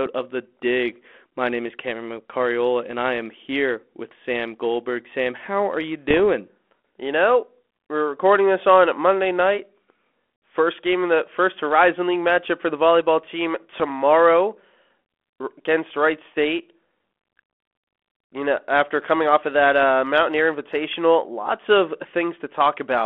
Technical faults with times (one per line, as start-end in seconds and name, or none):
6.09-6.20 bit errors on an ADPCM link
13.74-13.82 bit errors on an ADPCM link